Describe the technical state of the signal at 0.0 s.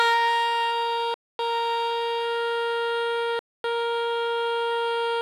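At 0.0 s the music comes through intact, with no audible technical fault at that moment.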